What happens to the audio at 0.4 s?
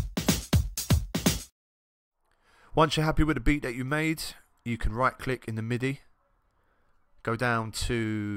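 Nothing goes wrong at 0.4 s; the audio plays through that moment intact, with no dropout, click, glitch or other fault.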